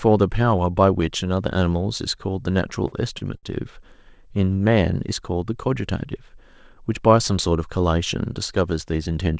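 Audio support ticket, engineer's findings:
Short stalls from late packets at 2.88–2.94 s, 3.18–3.23 s and 3.37–3.45 s: sound held about 44, 26 and 60 ms. Jitter buffer ran dry, last frame stretched until the packet arrived, then resumed with nothing lost. Call codec band-limited, nothing above 8 kHz.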